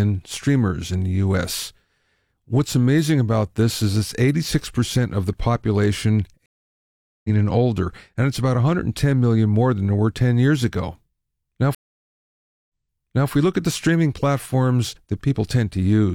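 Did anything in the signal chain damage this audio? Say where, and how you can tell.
Yes, at the network stage: the stream connection dropped twice, a stream reconnect each time. At 6.46 to 7.30 s, after "of the population", the decoder restarted following 784 ms of silence and picked up roughly 0.7 s further on at "and older and it's", so that stretch is lost. At 11.75 to 13.31 s a 946 ms gap ends with the server resending a burst, replaying 604 ms of earlier audio and resuming at "we look at the".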